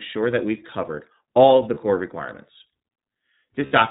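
iLBC codec coding runs through the whole speech clip: nothing above 4 kHz, with a plainly rough, synthetic edge from independently coded 30 ms frames, which fits the 13.33 kbps mode. Lost iLBC frames occur at 1.74–1.78 s, between "covered all of the" and "core requirements", and again at 3.66–3.72 s. The decoder fills each 30 ms and 60 ms gap (likely one and two lost frames) with a repeated pitch cycle blended with noise, heard as a brief buzzy held vowel before the speech recovers.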